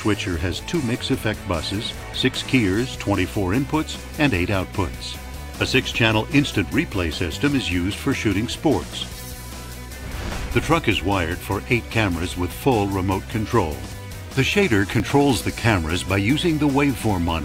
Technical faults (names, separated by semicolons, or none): dropped buffer (overrun)